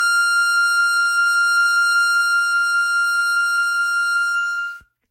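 From start to finish the music sounds swirly and hollow, with a smeared, watery texture and blurred attacks, and nothing comes through above about 16.6 kHz. The damage is heavier than a single pass at a modest bitrate would leave, which points to generation loss: the audio was likely decoded and re-encoded around ten times through a Vorbis-type codec at roughly 50 kbit/s, each pass adding fresh quantisation noise and spectral gaps on a shifted frame grid.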